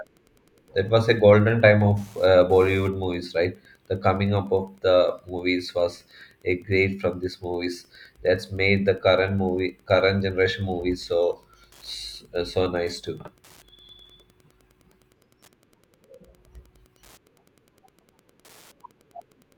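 Throughout the speech there is Wi-Fi interference: a nearby radio's beacon, sent every 102.4 ms, is rectified by the audio circuit. This produces a steady ticking just under ten times per second, roughly 40 dB below the speech level.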